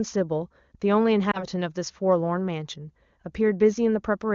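At 1.31 to 1.45 s, lost AMR speech frames: a corrupted frame failed its check, and the wideband decoder patched it by repeating the previous pitch and vocal tract settings at lower gain. The speech briefly dips or warbles, then returns weak or rough for a moment. The short disturbance suggests a single lost frame.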